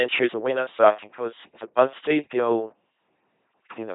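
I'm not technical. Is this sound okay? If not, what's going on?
No. Throughout, an LPC-10 vocoder makes the speech a buzzy robot voice. Unlike ordinary compression warble, each moment is either pure buzz or pure hiss.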